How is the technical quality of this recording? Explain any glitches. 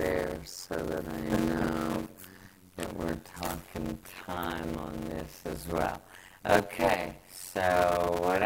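The technical quality is poor, with one fault throughout. Block size mismatch (padded): one stage writes shorter blocks, which fits 256-sample blocks, than the next stage reads, so zeros fill each remainder. This produces a steady 91.9 Hz buzz and playback slowed to 0.533 times speed at roughly normal pitch.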